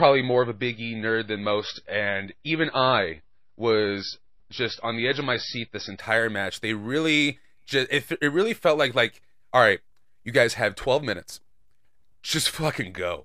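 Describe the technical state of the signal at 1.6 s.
At 1.6 s the speech is inside an adaptive stream starting at a low bitrate, which lasts from 0.0 to 6.0 s. The player opened on a cheap version of the stream to start fast. Nothing above 5.8 kHz survives, so the speech sounds dull and muffled. Codec smearing is plain. The sound fits an MP3 stream near 24 kbit/s. At 6.0 s the player switches to a better version, near 128 kbit/s. Quality jumps at once, with no gap.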